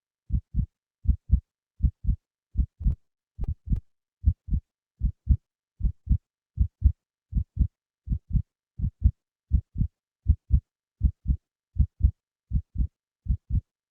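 From 2.74 to 4.17 s, packets kept arriving late, so the jitter buffer ran dry twelve times. Each time the receiver stretched the last sound to cover the wait, 186 ms in all, the longest single gap 40 ms. Nothing drops out, but the audio stutters and drags: repeated stalls.

Between 4.67 and 6.04 s comes a jitter buffer slow-down. With its reserve low, the receiver repeated short stretches of the waveform over and over, adding 88 ms. The sound plays at about 94% speed at unchanged pitch, drawn out and slightly sluggish.

At 8.06 to 9.10 s the opposite happens, a jitter buffer speed-up. The buffer held more audio than it aims for, so the receiver trimmed small pieces repeatedly, around 70 ms altogether. The audio runs at about 106% speed without a pitch change, sounding hurried. Throughout, the Opus call path limits the top end to 8 kHz.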